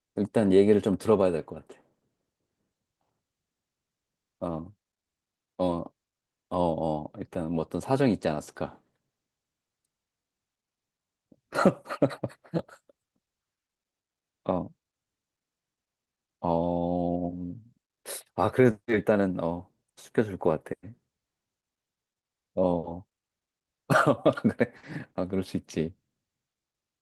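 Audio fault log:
Nothing stood out on listening to this speech recording.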